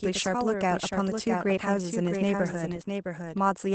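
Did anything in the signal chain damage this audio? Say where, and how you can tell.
Yes. There's a doubled audio track: a second copy of the speech trails the original by roughly 0.7 s, a few dB quieter, with no room colour. That's likely a second capture path or a misaligned edit.

At the codec stage, there's Opus voice compression in SILK mode at 12 kbps. Nothing above 8.7 kHz survives, and the speech sounds muffled and slightly hoarse throughout.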